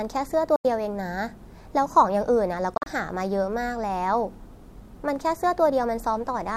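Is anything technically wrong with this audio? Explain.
Yes. The speech cuts out twice. From 0.56 to 0.65 s it drops to silence for about 87 ms. From 2.74 to 2.86 s it stutters, with several short holes spread over about 116 ms, the longest about 44 ms. Each time the speech picks up further along, as if it had kept playing. This is likely a Bluetooth dropout: audio packets reached the headphones too late and were discarded, leaving silence until good data arrived.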